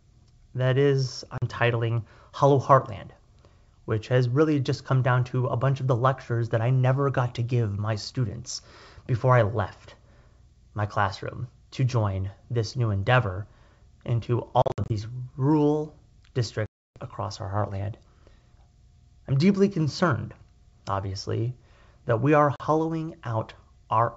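At 1.38 s, after "that is", about 40 ms of speech drops out as a hard-edged silence. That is packet loss on an ADPCM call, roughly two packets' worth. At 14.62 s, after "this new endeavor into", gaps of up to 60 ms are scattered over 0.3 s. At 16.66 s a 0.3 s hole follows. At 22.56 s, after "obviously that we are", another 40 ms goes missing. Each time the decoder's predictor and step size lose track of the sender's, so the audio comes back with brief, slight distortion. The otherwise clear wideband G.722 sound recovers within tens of milliseconds.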